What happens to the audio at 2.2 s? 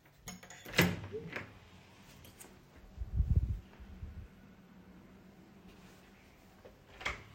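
Nothing goes wrong at 2.2 s; the sound carries on intact through that moment, with no dropout, click or other fault.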